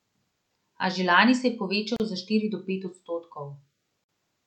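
At 1.96 to 2.00 s, just before "za štiri do pet", the speech stops for about 35 ms, and at 4.04 to 4.09 s a second silence of about 49 ms opens. These are gaps at a join of encoded pieces: separately encoded segments were spliced with their start-up delay and end padding left in. Unlike a dropout, nothing is lost. The speech resumes exactly where it stopped, with smeared edges.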